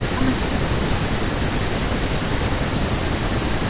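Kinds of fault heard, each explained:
Speech suppressed in double talk: The speech sinks by about 40 dB through two long stretches. An echo canceller likely turned the talker down while both sides spoke.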